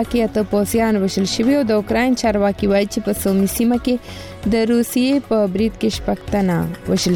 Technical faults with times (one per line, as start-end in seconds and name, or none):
none